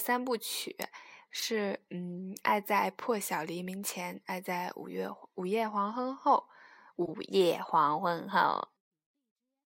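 At 1.39 to 1.43 s, a corrupt frame is decoded across about two frames. Flipped bits mislead the decoder, so energy lands at wrong frequencies. It comes through as a brief chirp, squeak, blip or noise burst. At 7.02 to 7.11 s, roughly seven frames fail the same way.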